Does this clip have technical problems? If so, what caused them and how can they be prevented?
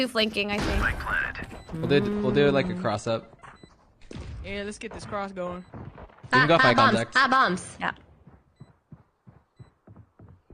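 Yes. From 2.14 s to the end, the audio abruptly loses its treble, with nothing above 9.7 kHz, and gains codec smearing without any gap. This is an adaptive stream at a lower bitrate, switching down when the connection slowed, which fits a drop to roughly 32 kbit/s AAC. A steadier connection or a larger playback buffer would prevent the switch.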